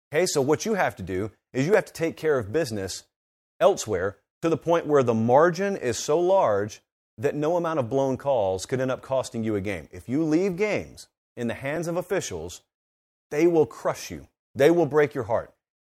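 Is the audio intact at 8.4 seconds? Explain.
Yes, the audio at 8.4 seconds is intact, with no dropout, click, distortion or other fault at that point.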